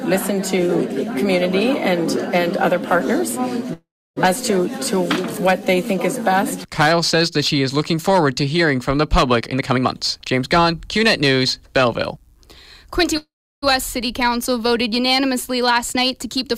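The audio has two call audio freezes, at 3.73 to 4.18 s and 13.17 to 13.64 s. Each time the sound halts, the last instant smears into a brief fading buzz, and then there are about 0.3 s and 0.34 s of silence before it resumes where it stopped. This is likely from packets arriving late and the jitter buffer running dry, inserting about 0.43 s and 0.45 s of delay with nothing lost. On a spectrogram each shows as a smooth horizontal smear of the final spectrum that fades into a blank block. The waveform shows a decaying tail, then a flat line. There are also two jitter buffer speed-ups, where the receiver drains excess buffered audio by repeatedly cutting out slices of one or a few pitch periods. From 9.40 to 12.47 s playback runs at 113% speed, removing roughly 0.4 s, so it sounds hurried but keeps its pitch. From 15.73 to 16.44 s it runs at 104%, trimming a few tens of milliseconds. On a spectrogram the harmonic lines stay at the same heights while events crowd closer together in time. 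The waveform shows onsets packed tighter.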